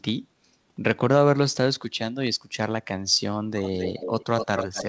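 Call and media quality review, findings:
Echo leak, 3.64 s to end: speech repeated about 250 ms late, roughly 10 dB down; likely the far-end echo canceller letting loudspeaker pickup through.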